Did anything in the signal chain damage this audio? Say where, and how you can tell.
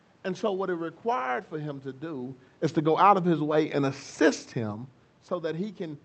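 No, nothing in the signal chain damaged this speech. The level changes around 2 s and 5 s come from the talker moving relative to the microphone, and the room noise belongs to the recording, while the high end stops at about 8 kHz with coding texture, which fits a wideband Opus call path at a moderate bitrate.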